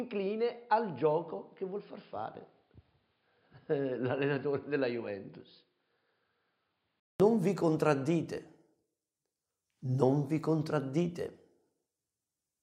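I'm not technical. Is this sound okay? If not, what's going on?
No. For the first 7.2 seconds the sound is dull, boxy and a little quieter. Then, after a brief silence at about 7.2 seconds, it suddenly becomes clearer. This is likely an input switched to a poorer device, such as a lesser microphone or headset.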